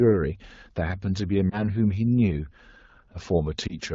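At 1.49 to 1.70 s and again at 3.67 to 3.79 s, lost AMR speech frames: each time a single 20 ms frame failed its checksum and the decoder bridged it with the previous pitch and vocal-tract settings, giving a brief dip or warble. A spectrogram shows smeared, briefly dimmed harmonics; the waveform shows a short amplitude sag.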